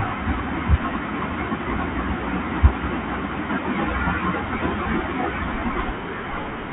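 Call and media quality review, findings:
Bluetooth CVSD headset codec, whole clip. Speech band-limited, nothing above 4 kHz. Sibilants scratchy. Loud high content distorts where the one-bit adaptive step can't keep up. Granular hiss under speech. Damage plainly audible. Fits 64 kbps CVSD.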